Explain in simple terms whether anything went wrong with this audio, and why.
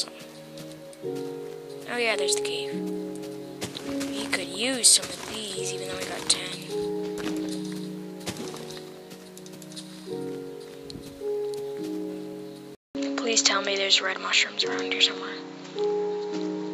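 At 12.75 s the sound goes quiet for about 0.2 s, then comes back duller and flatter, as if the brightness had been switched off. The volume shifts and a faint new background hiss appears, lasting until the end. This is most likely an input switched to a poorer device partway through recording. The replacement microphone passes nothing above about 7.6 kHz, which removes the crisp top end, and it adds its own tone, level and noise.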